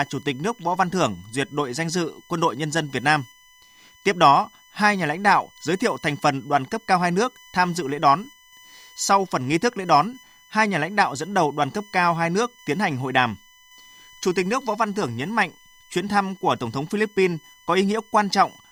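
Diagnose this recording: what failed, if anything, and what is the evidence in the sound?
A USB whine runs through the whole speech recording, so the failure sits in the analogue wiring, where power or ground is shared with a USB bus. The fixed-pitch tone sits at 1 kHz, with its strongest component at the third harmonic, 3 kHz, roughly 30 dB below the speech. The 1 kHz spacing matches USB's 1 ms frame timing, whose current pulses leak in through the supply. Mains hum would instead sit at 50 or 60 Hz and its multiples.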